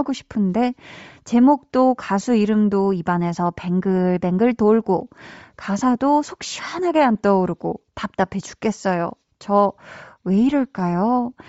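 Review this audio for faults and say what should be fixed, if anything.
The speech has a breathy, grainy edge throughout, with the upper band sounding thin and hissy rather than detailed. This is likely Bluetooth LC3 compression at a low rate, consistent with around 32 kbps and short 7.5 ms transform frames. At that rate the encoder drops much of the high-frequency content and fills the gaps with noise. On a spectrogram the region above the core speech band looks smeared and noise-like, without clean harmonic lines. Using a higher LC3 bitrate on the link would prevent this.

At 7.83 s there are lost LE Audio frames: a brief gap of about 7.5 ms, which points to a single dropped frame. The decoder hides it by repeating the previous spectrum with randomised phase, so the moment sounds like a tiny rough smear rather than a clean click or a silence. On a spectrogram it appears as a thin vertical band where harmonics blur into noise, and the waveform shows a short stretch of irregular, slightly decorrelated signal. 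Improving radio conditions, or allowing retransmissions on the link, would prevent it.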